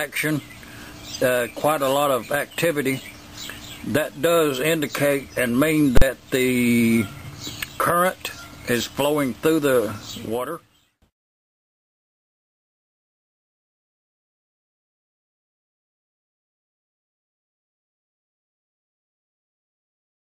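At 5.97 to 6.02 s, invalid numbers at full scale: a calculation produced infinite or invalid values, pinning one block of about 43 ms, likely 2048 samples, at one extreme value, heard as a single loud bang.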